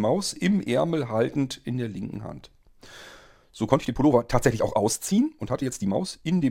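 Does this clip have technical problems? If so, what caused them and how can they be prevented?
Yes. A time-stretched section, likely software squeezing audio to fit a length, runs from 3.67 to 6.51 s at 1.45 times speed, so the speech turns abruptly rushed at unchanged pitch. Prevent it by editing material to length instead of compressing its timing.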